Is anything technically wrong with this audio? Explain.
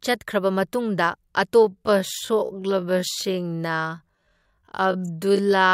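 Yes. From 1.61 s to the end, a time-stretched section slows the speech to about 0.52 times its pace, likely from software repeating short pieces, so it drags while the pitch stays put rather than dropping as a plain slowdown would.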